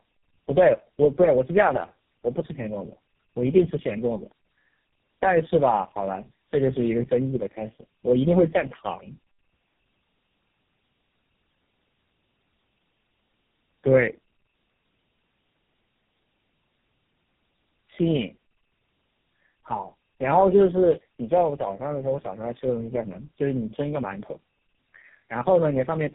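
Speech throughout shows tandem speech coding: nothing above 3.5 kHz, with a rough, muffled, warbling quality that compounds as three low-rate mobile coders, consistent with AMR and GSM, each re-encode the last one's output. Unlike a single low-bitrate codec, the artefacts stack into smeared, gritty texture.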